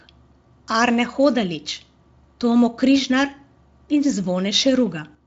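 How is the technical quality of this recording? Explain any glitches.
No glitches or technical faults can be heard here.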